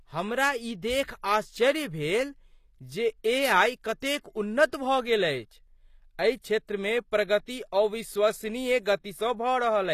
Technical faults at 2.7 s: HE-AAC compression

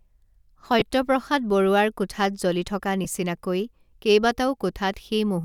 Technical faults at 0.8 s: lost LE Audio frames

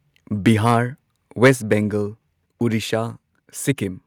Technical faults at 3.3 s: none

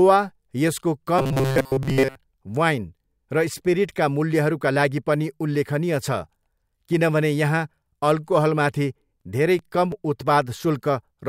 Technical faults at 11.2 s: none

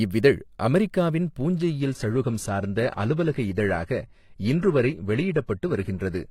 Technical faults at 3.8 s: adaptive stream at a lower bitrate

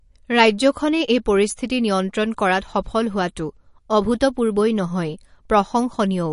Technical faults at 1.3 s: MP3 compression

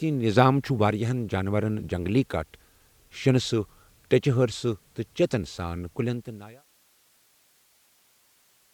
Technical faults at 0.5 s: none

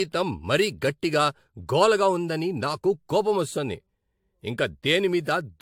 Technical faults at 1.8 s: generation loss

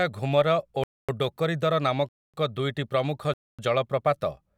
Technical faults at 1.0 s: gap between chunks

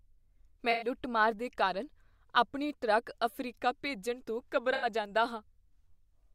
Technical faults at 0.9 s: AAC frame loss with concealment

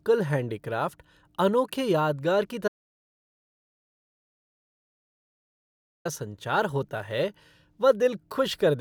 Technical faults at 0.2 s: none

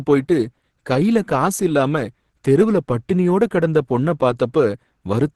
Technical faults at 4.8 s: Opus compression

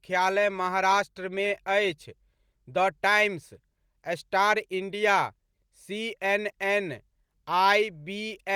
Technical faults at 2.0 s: none

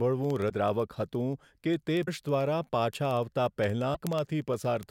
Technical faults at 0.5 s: word clock ticks; broken MP3 bit reservoir

